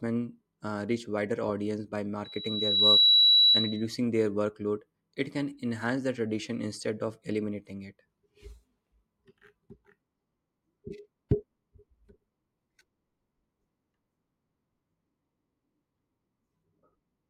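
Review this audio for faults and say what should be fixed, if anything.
A loudspeaker feedback squeal appears between 2.24 and 3.87 s, right after "reach wider audience by" and ending before "their workload". A single tone near 3.9 kHz swells over roughly 0.7 s and peaks about 10 dB above the speech. The microphone was picking up its own loudspeaker, and the loop gain exceeded one at that frequency. Unlike a steady electrical whine, it grows from nothing and then stops. Keep the microphone out of the speaker's coverage, or notch 3.9 kHz in the monitor feed.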